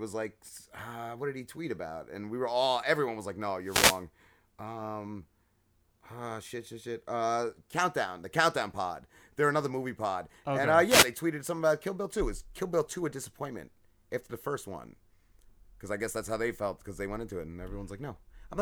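At 3.63 s, right after "everyone was like no", the speech is hit by a wireless microphone noise hit, a quick swish of static lasting about 0.4 s until 4.03 s. The radio link from the mic dipped as reflected signals cancelled, so receiver hiss rose. It happens again from 10.87 to 11.08 s, after "pod okay and uh" and just before "tweeted something about", a shorter static burst of the same kind.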